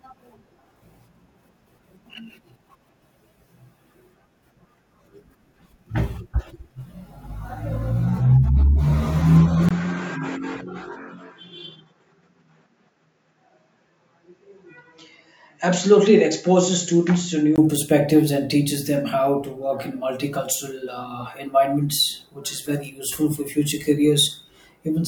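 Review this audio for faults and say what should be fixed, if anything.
From 9.69 to 17.58 s, likely an input switched to a poorer device: after a 20 ms gap, quieter audio, nothing above 7.6 kHz, new background noise, unlike plain filtering. Lock recording to one input device so the system cannot swap it mid-take.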